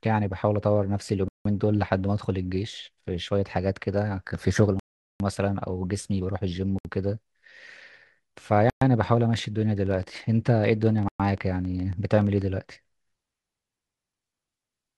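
The speech cuts to silence five times, at 1.28 to 1.45 s, 4.79 to 5.20 s, 6.79 to 6.85 s, 8.70 to 8.82 s, and 11.09 to 11.20 s. The gaps last 170, 406, 64, 116 and 113 ms. Each sounds like a Bluetooth stall. Delayed packets likely left the playback buffer empty until resent data arrived.

From 9.34 to 12.43 s, a train of clicks sits over the speech. There are around thirty, about ten per second, unevenly spaced. They peak roughly as loud as the speech itself. The likely source is interference or a faulty connection or power supply injecting repeated pulses. During this stretch the 11.09 s dropout also occurs.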